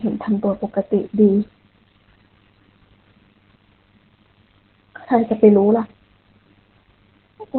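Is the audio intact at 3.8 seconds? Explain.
No. Opus voice compression runs through the whole clip. Nothing survives above 4.2 kHz. Coarse linear-prediction coding, fitting about 8 kbps, leaves the speech muffled, hoarse and slightly robotic.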